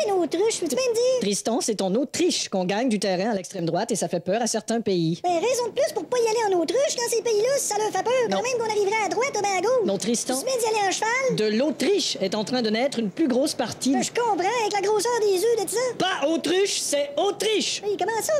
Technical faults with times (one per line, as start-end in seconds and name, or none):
3.37-3.59 sudden gain jump